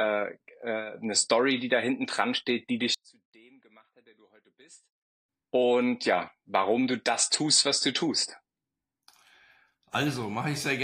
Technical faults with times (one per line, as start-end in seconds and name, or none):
2.94-5.29 one channel inverted